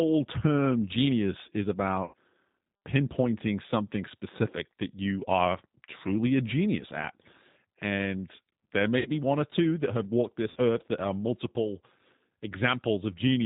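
Across the whole recording the speech sounds narrow and slightly rough, with nothing above about 4 kHz and a faintly synthetic texture to the voiced sounds. This is the G.729 codec, here the G.729A variant, and the damage is plainly audible. The band limit and graininess fit an 8 kbit/s stream. The decoder rebuilds each 10 ms frame from a vocal tract filter, a pitch predictor and a handful of pulses, so fine detail in the voice is lost.

At 2.05 s, right after "term genius is", the voice smears into a brief stretched tone or coloured noise that fades instead of continuing cleanly, and it takes a moment to recover. The same happens from 8.99 to 9.10 s, just before "one or two that". It happens again from 10.50 to 10.58 s, between "two that have walked" and "earth that are multiple". These are VoIP packet loss concealed by the speech codec. About 80 ms of audio went missing in the first gap, which fits four lost packets, and 60 ms in each of the later two, which fits three. 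The decoder filled each gap by repeating its last pitch and filter at falling gain. Because each frame builds on the one before, the voice stays weak briefly after the audio resumes.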